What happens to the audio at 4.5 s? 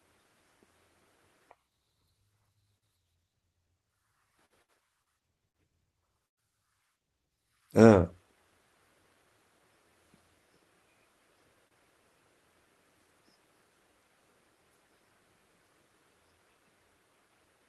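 A short stall from a late packet occurs at 4.45 to 4.53 s. A packet arrived late, and the jitter buffer ran dry. The receiver stretched the last sound by about 48 ms, then resumed where it left off. Nothing is lost, but the sound drags briefly.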